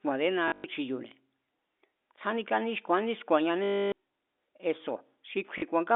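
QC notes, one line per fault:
0.48–0.64 s, 3.64–3.92 s, 5.58–5.62 s: packet loss with last packet repeated. Missing audio was replaced by looping the previous packet, about 140, 280 and 40 ms per event, with the first scattered and its longest run 100 ms. Repeats misaligned with pitch buzz at 50 Hz, which fits 20 ms packets, giving a robotic stutter.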